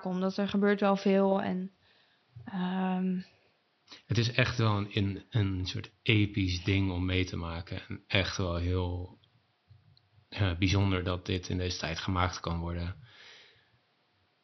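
Nothing stood out on listening; the speech carries only faint room noise, about 43 dB beneath it, which belongs to the recording itself.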